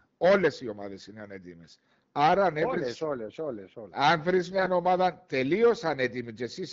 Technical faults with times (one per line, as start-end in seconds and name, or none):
4.52-4.71 AMR bit errors